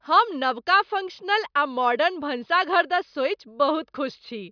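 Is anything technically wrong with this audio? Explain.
No, nothing technically wrong can be heard in this speech recording. No working path needs comment, and there is no fault to place in time or explain.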